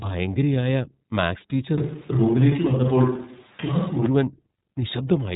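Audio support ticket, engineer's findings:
iLBC codec on the speech path, whole clip. Narrowband coding, each 30 ms frame's excitation coded independently; the character fits the 13.33 kbps mode. Result: nothing above 3.8 kHz. Speech stays intelligible but sounds plainly rough and synthetic.

Switch to a distant microphone, 1.78 to 4.06 s. Likely cause: the close mic dropped out and a far pickup took over. Abrupt change in and abrupt change back. Level stays about the same. Speech goes roomy and hollow with thinner low end, and room noise rises to roughly 30 dB below the speech for that span.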